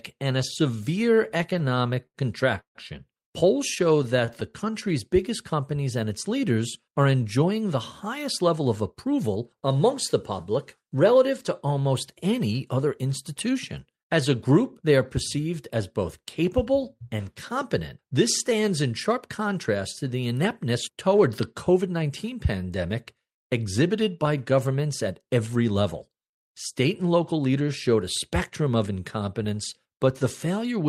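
Repeated stalls (stutter) hit this speech recording at 0.99 to 2.17 s and again at 3.75 to 4.54 s. Packets reached the receiver late, so its jitter buffer kept running dry and it stretched the last sound to bridge 15 gaps and then 9, filling 213 ms and 85 ms. The longest gaps are 79 ms and 17 ms. A call audio freeze at 2.61 to 2.77 s adds 144 ms, about 100 ms of it silent, most likely because packets were held up in transit and the buffer emptied until they arrived. Nothing is lost in either fault, but the speech drags. Jitter buffer speed-up follows at 6.81 to 9.42 s (107% speed, roughly a fifth of a second trimmed), 21.69 to 22.10 s and 27.07 to 27.68 s (110%, a few tens of milliseconds each), where the receiver cut pitch-period slices to shrink an overfull buffer, so the speech sounds hurried at unchanged pitch.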